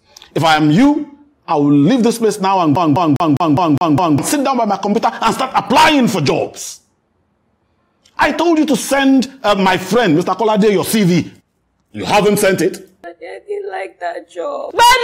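A scratch or defect on the disc sends the laser back one track at the same point on each rotation, so the audio is caught in a CD stuck on one turn from 2.76 s to 4.18 s. The same 0.20 s slice plays seven times in a row, with a brief mute at every jump back, producing the quick, perfectly even stutter of a skipping CD before playback moves on.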